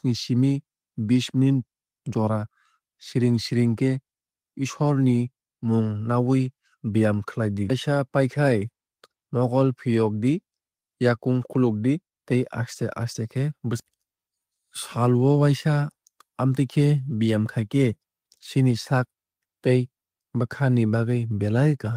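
No technical faults can be heard in this speech recording. There is no moment in it that calls for a timestamp or a note.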